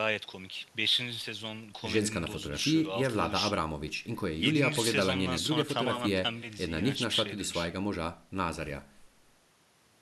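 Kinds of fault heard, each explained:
Nothing stood out on listening to the speech.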